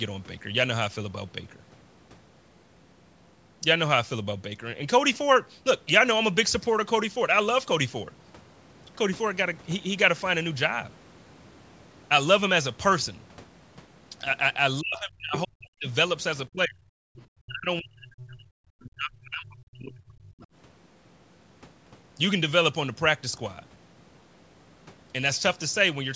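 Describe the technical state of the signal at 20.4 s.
At 20.4 s you're right at the tail of speech suppressed in double talk, running from 18.83 s. The talker's level sinks in patches, dipping as deep as about 35 dB, for roughly a second and a half. That likely happened because both sides talked at once and the echo canceller ducked everything it couldn't untangle.

Straight after, from 20.41 to 20.46 s, there's a short scrap of the other side's voice leaking through. It's faint, about 30 dB under the talker, and it's likely loudspeaker echo that the canceller didn't fully strip out.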